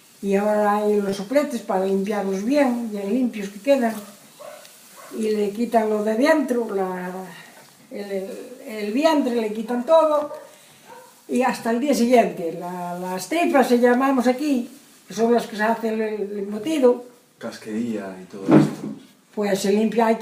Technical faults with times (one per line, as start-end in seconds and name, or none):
1.09-1.13 short concealed packet loss